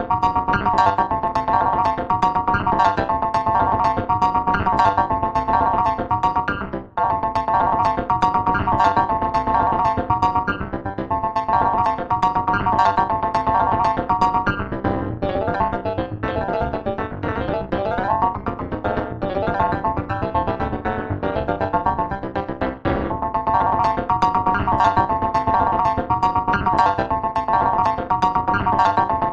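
Overlap-add ripple runs through the whole clip. The frames were rejoined with overlapping windows that do not add up to a steady gain, so the level dips by about 60 dB once per frame, around 200 times a second. This gives a harsh, metallic buzz with extra tones around each note. Unlike mains hum, it modulates the audio itself rather than adding a separate tone.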